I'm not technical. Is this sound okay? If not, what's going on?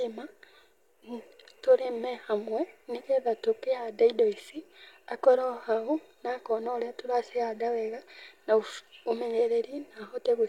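Yes, nothing in this speech recording stands out as a technical problem.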